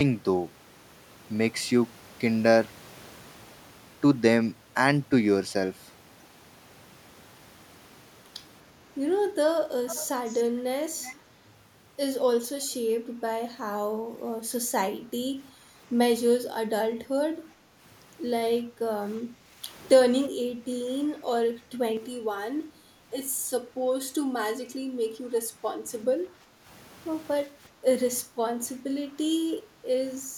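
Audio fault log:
9.87–10.43 s and 11.02–11.21 s, echo leak: a faint, delayed copy of the speech trails the original by 368 ms, roughly 20 dB down in the first stretch and quieter in the second. This is likely a far-end speakerphone whose echo canceller let part of the returned signal through.
17.53–17.75 s, 18.66–19.61 s, 20.47–20.67 s, 26.44–26.63 s and 27.48–28.39 s, background gated by the echo canceller: the room tone briefly sinks by about 7 to 9 dB and then recovers. Each dip lasts from a fifth to half a second. The canceller is clamping the microphone while the loudspeaker plays.
21.97–26.03 s, channel delay (comb filtering): the sound turns hollow and phasey. One channel lags the other by roughly 3 ms, and summing them to mono cancels shared content at fixed, evenly spaced notches, starting near 200 Hz.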